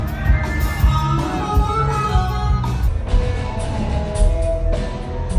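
At 2.88 s the sound suddenly drops in pitch and slows down, and it stays that way to the end at 5.39 s. This is a wrong sample rate fault. The samples are clocked out slower than they were captured, with no resampling. Everything runs at two-thirds speed, about 0.667 times. Pitch falls by about seven semitones, roughly a fifth. This fits 48 kHz material played at 32 kHz. The result sounds low, heavy and dragged.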